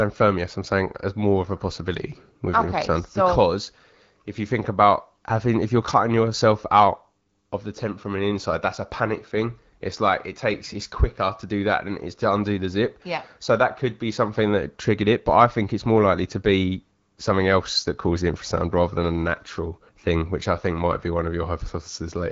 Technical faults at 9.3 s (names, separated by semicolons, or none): none